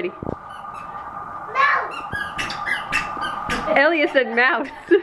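No technical faults can be heard anywhere in this audio.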